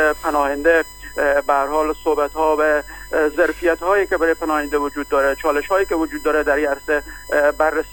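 A USB whine runs from start to end. Current pulled in 1 ms bus frames leaks in through the power or ground. The result is a fixed 1 kHz tone with harmonics, strongest at 16 kHz. It sits roughly 20 dB below the signal.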